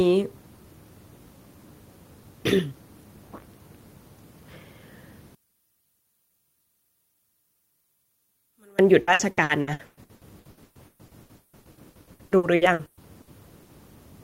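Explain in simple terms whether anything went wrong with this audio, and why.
Two things went wrong in this speech recording.

From 5.35 to 8.79 seconds, the speech suddenly becomes very faint, almost gone. The likely cause is one channel inverted. A stereo recording has a left and a right side. If one side is flipped upside down, the matching parts cancel when both sides are mixed into one. The voice sits in both sides equally, so it nearly disappears.

From 9.01 to 13.72 seconds, the speech turns choppy and robotic. This is repeated packet loss. Pieces of audio went missing many times in a row. Each hole was patched by stretching the sound just before it. The longest hole is 180 milliseconds. Over two fifths of this stretch is filled in this way, so the voice sounds broken.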